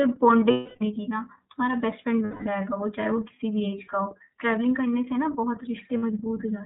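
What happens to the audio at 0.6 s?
A held, slightly buzzy vowel-like tone replaces the speech from 0.51 to 0.82 s. These are lost iLBC frames: the decoder repeats the last pitch cycle mixed with noise across roughly 300 ms of missing packets, which fits ten 30 ms frames. Around that moment the speech is also narrowband and a little rough and synthetic, with nothing above 4 kHz. That is the iLBC codec at work throughout, and the sound fits its 13.33 kbps mode.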